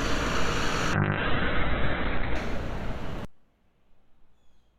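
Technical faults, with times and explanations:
0.94 to 2.41 s, call bitrate drop. The encoder's rate fell from 128 to 8 kbps, staying at the bottom for about 1.4 s. Coarse coding makes the sound rough and watery. Bandwidth shrank from 20 kHz to 4 kHz, so it also turns muffled.
3.25 s to the end, one channel inverted. The sound drops by about 34 dB and what remains is faint. This is likely reversed polarity on one stereo channel. Summed to mono, the content common to both channels cancels.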